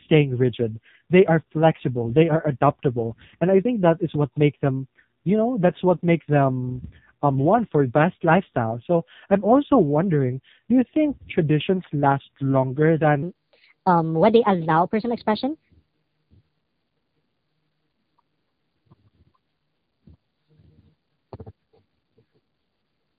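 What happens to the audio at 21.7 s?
At 21.7 s the speech is in the section at the wrong speed, running from 13.23 s to the end. It plays 1.27 times too fast, raising pitch by about four semitones and hurrying the syllables, likely from playback against the wrong clock. On a spectrogram, harmonics sit higher and more widely spaced; the waveform shows syllables compressed in time.

The AMR narrowband mobile codec also affects this moment, as it does the whole clip. Nothing above 4 kHz survives, so a spectrogram shows a hard ceiling there. Heavy damage makes the voice buzzy and synthetic, pointing to a bitrate near 5.9 kbps.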